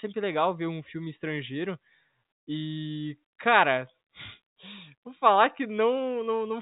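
No technical faults are audible.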